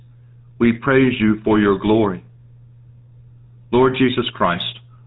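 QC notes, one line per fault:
throughout, GSM full-rate codec: the speech has been squeezed through a low-bitrate phone codec, which fits GSM full rate at 13 kbps, modelling the vocal tract and exciting it with sparse regular pulses, so everything above 4 kHz is gone and the voice carries a plainly audible buzzy, gravelly roughness.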